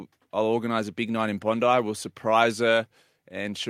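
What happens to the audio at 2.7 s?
Nothing goes wrong at 2.7 s; the speech plays through that moment intact, with no dropout, click or other fault.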